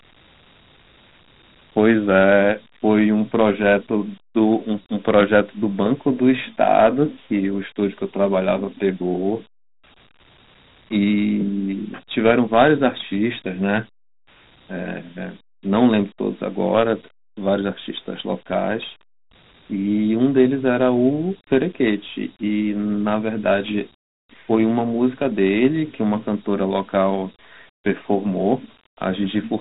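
Throughout, the speech carries Dialogic VOX ADPCM grit: coarse 4-bit steps leave a hiss trailing it, with nothing above 3.8 kHz, which fits a 32 kbps stream.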